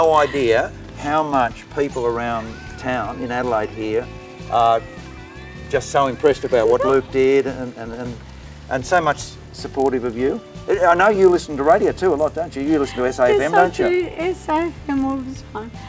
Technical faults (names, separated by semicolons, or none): resampler restarted on every block